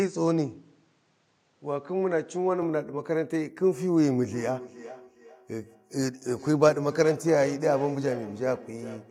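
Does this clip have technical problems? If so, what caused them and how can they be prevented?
Yes. From 0.00 to 2.62 s, the sound passes a narrower band, likely from an input switched to a poorer device. A spectrogram shows a hard ceiling on the high frequencies with no gap at the switch. Prevent this by fixing the input device in system settings.

From 4.32 s to the end, there is feedback echo between two devices. Speech comes back roughly every 0.4 s, at least about 15 dB below the original, seen as evenly spaced fainter copies in the waveform. Keep only one device joined per room.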